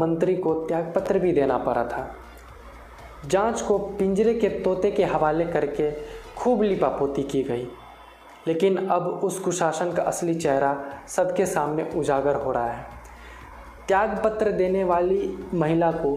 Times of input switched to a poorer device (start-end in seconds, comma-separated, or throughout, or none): none